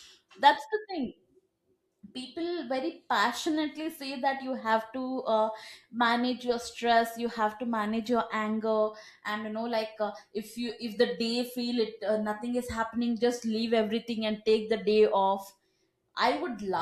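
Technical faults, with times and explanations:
Nothing technical stands out here, so there's no fault to list for this bit of speech.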